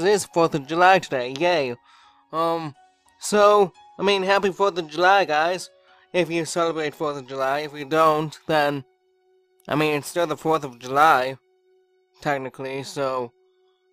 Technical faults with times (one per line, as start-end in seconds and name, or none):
7.39-11.94 sample clock jitter